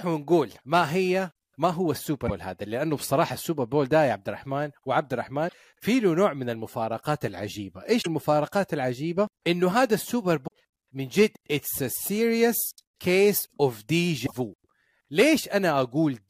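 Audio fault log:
2.24–2.31 s, 5.45–5.54 s, 7.98–8.07 s, 10.44–10.48 s and 14.23–14.32 s: damaged data in a compressed stream. Corrupt bytes make the decoder misread frames and lose sync, so each spot becomes a brief glitch in the speech.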